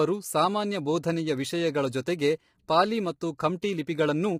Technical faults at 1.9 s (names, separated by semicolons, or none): low-delay AAC compression